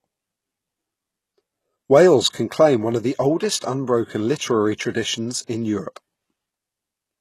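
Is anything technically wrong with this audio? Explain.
Yes. All the way through, the speech carries plainly audible HE-AAC compression damage, most likely from a low bitrate around 16 kbps. Nothing reaches above 12.3 kHz, and the treble below that is rebuilt from copied lower bands rather than coded, so s sounds come out gritty and lispy.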